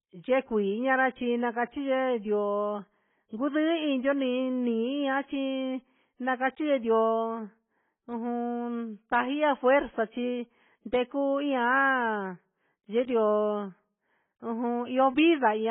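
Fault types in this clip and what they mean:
AAC compression: The speech sounds dull and smeared, with nothing above about 3.7 kHz, and the damage is heavy, with a warbly, fizzy edge on sibilants and held vowels. The likely cause is AAC-LC squeezed to a very low bitrate, which fits something like 16 kbps. At that rate the encoder drops the top band entirely and starves what's left of bits, so the spectrum gets patchy and the detail turns swirly.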